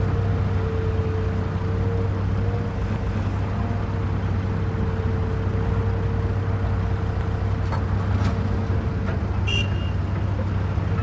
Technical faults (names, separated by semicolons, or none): overlapping chunks